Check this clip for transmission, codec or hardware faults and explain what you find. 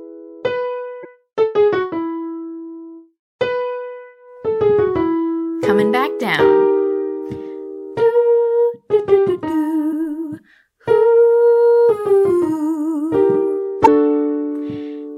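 The clip has one kind of fault, occurring three times. Damaged data in a compressed stream at 1.01–1.05 s, 9.89–9.93 s and 13.83–13.88 s: corrupted bytes make the decoder misread frames and lose sync, producing brief chirps or blips.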